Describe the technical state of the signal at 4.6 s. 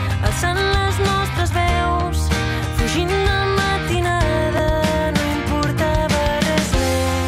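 Chunks out of order at 4.58 s: one 5.33 ms chunk arrives a single chunk late and plays after the one meant to follow it. Nothing goes missing, but the swapped order leaves three hard joins, heard as a tiny jumbled flicker.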